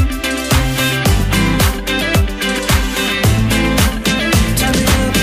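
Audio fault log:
None: there is no fault to log in this audio.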